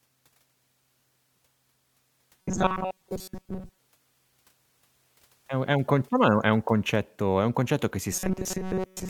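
From 2.42 to 3.79 s, and again from 8.13 s after "è un concetto che" to the end, the speech turns into a rigid metallic buzz near 188 Hz that only loosely tracks the words. This is robotic sound from repeated short buffers. Most of each stretch is likely made of a block of about 5.3 ms replayed while fresh audio arrived too slowly, and that loop length sets the fixed buzz pitch.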